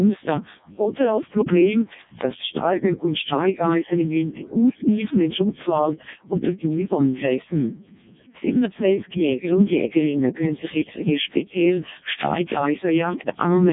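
Speech here runs through the Codec 2 vocoder from start to finish. The decoder rebuilds the voice from pitch, voicing and envelope as sine waves, giving a heavily robotic, buzzy result with nothing above 3.8 kHz, which fits the lowest 0.7 kbit/s mode.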